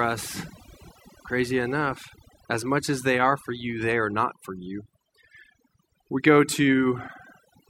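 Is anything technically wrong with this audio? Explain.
Yes. Overdone noise removal runs throughout the speech clip. A noise reduction process set far too aggressively is cutting individual frequency bands down or out whenever their level sits close to its noise estimate, and the quieter components of the voice fall below that threshold along with the noise. The background between phrases drops and breaks up into twinkling, chirpy specks.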